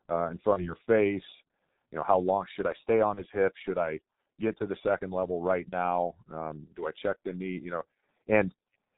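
Throughout the speech the sound is muffled and hoarse, with smeared consonants and nothing above 4 kHz. This is heavy G.723.1 codec damage: its slow 30 ms frame updates and coarse voice model match the 6.3 kbit/s mode.

From 0.53 to 0.74 s, after "uh in", from 3.14 to 3.20 s, after "should I stay on", and from 5.69 to 5.76 s, after "the second level right", the speech smears into a fading buzzy tone or coloured noise and recovers weakly. This is VoIP packet loss concealed by the speech codec. Each gap fits a single lost 30 ms frame that the decoder filled by extrapolating its last pitch and filter.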